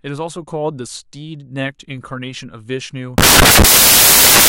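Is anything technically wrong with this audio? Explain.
Yes. From 3.18 s right through to the end at 4.48 s, the speech is swamped by samples built from the wrong bytes. The reader is assembling each sample out of the wrong pair of bytes, whether shifted by one, swapped, or misaligned, so the jittery low-order bits end up as the loudest part of every value. You hear a sudden blast of loud, harsh broadband noise, close to white on the louder sounds.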